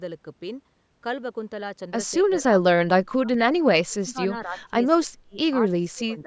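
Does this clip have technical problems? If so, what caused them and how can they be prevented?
Yes. Speech suppressed in double talk dips the speech at 2.21–2.46 s, 2.81–3.4 s, 3.87–4.75 s, 4.95–5.37 s and 5.61 s to the end, by about 15 to 35 dB. In the waveform and spectrogram these show as sudden dips or gaps. The likely cause is an echo canceller that couldn't separate the talker from the far-end echo during overlapping speech, so it suppressed both. To prevent it, use full-duplex-capable echo cancellation or a headset.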